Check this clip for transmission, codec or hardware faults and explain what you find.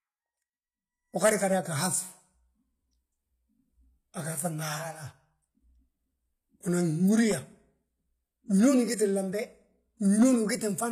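One codec fault runs through the whole clip. Throughout, the speech shows HE-AAC compression damage: treble above 14.9 kHz is gone, and the top is likely rebuilt by band replication, so s sounds turn gritty and lispy, which fits a low bitrate around 24 kbps.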